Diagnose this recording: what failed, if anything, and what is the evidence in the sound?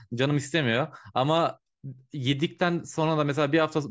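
Nothing failed; no stage shows any audible fault.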